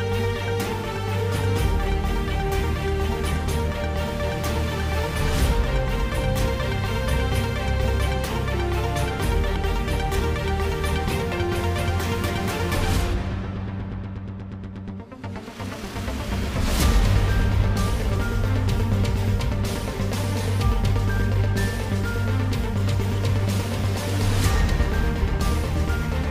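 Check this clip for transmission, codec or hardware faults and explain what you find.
Four short skips occur, at 7.84, 9.56, 11.32 and 18.16 s. Each is a sudden jump forward, losing roughly 40 ms of sound. The likely cause is a dropped buffer (overrun): samples were overwritten before being read, so the two sides join directly.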